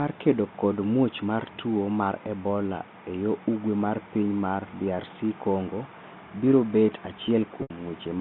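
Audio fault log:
7.62–7.70 s packet loss with pitch repetition: about 80 ms of audio went missing, which fits four 20 ms packets, and the receiver looped the last pitch period to cover it, so the sound holds a buzzy tone, fades away, then cross-fades back within the G.711 telephone band.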